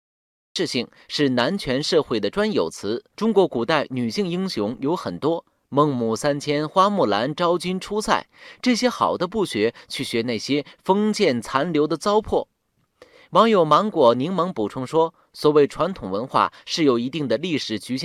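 The audio holds digital silence until 0.56 s, then speech bursts in mid-sound with no attack or fade. That is a cut-off start: capture began late. Unlike a dropout, nothing precedes the gap, and unlike a fade-in, the level jumps instantly.

From 3.95 to 5.19 s a steady buzz at 46.9 Hz rides under the speech. This is a block size mismatch (truncated): each block's tail is discarded, which fits 1024-sample writes. Pitch and pace stay essentially normal, which sets it apart from a pitch or speed fault.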